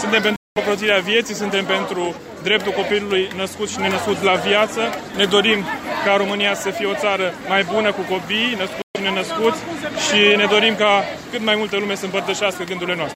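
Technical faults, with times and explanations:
0.36–0.58 s and 8.82–8.97 s, Bluetooth stall: the sound drops to complete silence for about 200 ms and then about 130 ms before carrying on, most likely because radio interference delayed packets until the headphones' buffer emptied and playback had to wait for retransmissions. Unlike a crackly dropout or a burst of digital noise, each gap is clean and empty, and unlike a hard edit, the sound resumes rather than jumping to new material.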